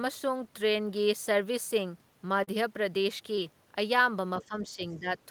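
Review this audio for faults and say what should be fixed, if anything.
Short concealed packet loss occurs at 2.43 to 2.49 s, where about 40 ms went missing, and at 3.35 to 3.39 s, where about 20 ms went missing. The receiver bridged each gap by extending the preceding sound and then blending back, leaving a brief smear or wobble in the speech. A larger jitter buffer, or a steadier network path with forward error correction, would keep packets from arriving too late to decode.

Speech suppressed in double talk appears at 4.40 to 4.81 s and again at 4.99 to 5.08 s. The speech dips by roughly 10 dB, covering about a third of a second in the first stretch and about a tenth in the second. The likely cause is an echo canceller that turned the line down because it could not tell the talker's voice from loudspeaker echo while both sides spoke at once. Tuning the canceller's double-talk detection, or switching the talker to a headset, would prevent it.

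The other side's voice leaking through shows up at 4.41 to 4.45 s as a faint scrap of a second voice, around 20 dB below the speech. It is likely loudspeaker output that reached the microphone and was not fully cancelled. A headset, or better echo cancellation on the talker's device, would stop the leak.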